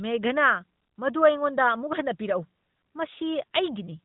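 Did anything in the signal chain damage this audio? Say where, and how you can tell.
No, nothing in the signal chain damaged this speech clip. What can be heard is the AMR narrowband mobile codec path at 12.2 kbps, its highest mode, which leaves nothing above 4 kHz and gives the typical narrowband mobile-call sound.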